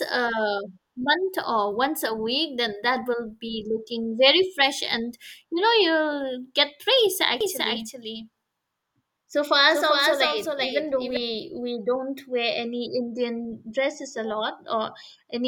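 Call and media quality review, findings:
Doubled audio track, 7.41 to 11.17 s, from after "get praise" until just before "we don't wear". Full-band second copy trails by about 400 ms. Sits roughly 5 dB under the original. No decay, no room colour. Switches in and out abruptly. Likely cause: a second, slower capture path mixed into the call. An edit holding two offset copies would sound the same. The fixed lag points to a parallel route rather than an acoustic echo.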